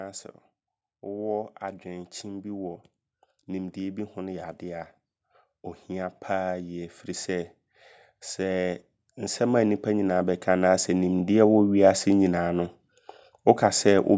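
From 6.26 s to 11.59 s, automatic gain rising lifts the level by about 10 dB as the gain control, judging the input too quiet, turns it up slowly. Unlike a sudden level jump, speech and background noise swell together across several seconds.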